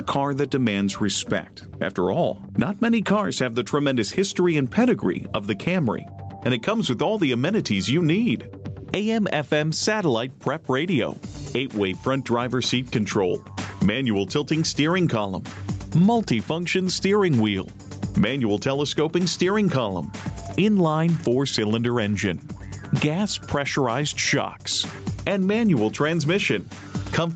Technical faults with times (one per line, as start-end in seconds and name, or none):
0.00-27.36 gain pumping